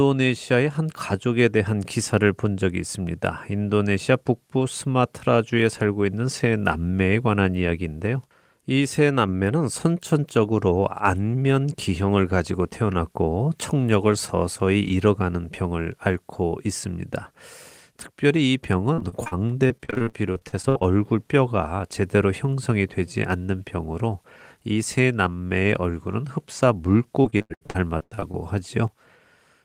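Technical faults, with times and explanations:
18.93–20.86 s: repeated packet loss (robotic sound). Short dropouts arrive in quick succession, the longest about 60 ms. Each hole is bridged by stretching the preceding sound, so roughly a quarter of this span is synthetic fill. The speech turns choppy.
27.22–28.36 s: repeated packet loss (robotic sound) again, denser this time. About 40% of the stretch is patched-over sound, and one gap runs to about 89 ms. The repeated concealment makes the speech choppy, with pieces missing.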